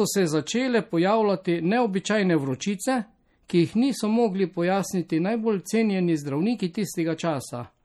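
Throughout the speech, a watery, swirling texture sits on the sound, and s sounds turn metallic and chirpy while attacks smear. The cause is likely MP3 compression at a bitrate starved enough to fit roughly 48 kbps. Short of bits, the encoder zeroes weaker spectral lines, which then flicker on and off between frames. The damage is plainly audible.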